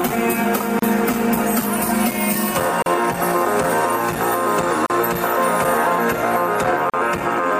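Short silences open at 0.79, 2.82, 4.86 and 6.90 s, one every 2 s, lasting about 32 to 38 ms: gaps at joins of encoded pieces, where each piece's leading silence and padded last frame were left in. On a waveform they are flat holes with smeared edges; on a spectrogram, thin vertical blank stripes.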